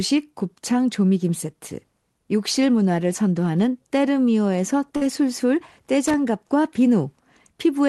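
At 4.96 to 5.02 s, a burst of packet loss: about 50 ms of speech is missing and concealment holds the last sound, fading it out. On a spectrogram, the held spectrum smears flat, then jumps. At 6.06 to 6.14 s, loose connector crackle: an intermittent contact chops the signal into irregular scratchy crackle, seen as ragged spikes and broadband vertical streaks.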